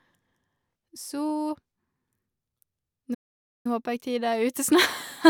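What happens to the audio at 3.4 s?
At 3.4 s the speech is in the middle of a playback stall. The output cuts to silence at 3.14 s and stays silent until 3.66 s, a gap of about 0.51 s. The sound stops abruptly in mid-flow rather than fading. This is likely the player running out of buffered data, or its playback thread being blocked. Output can only resume once the player recovers. At 3.66 s the speech returns.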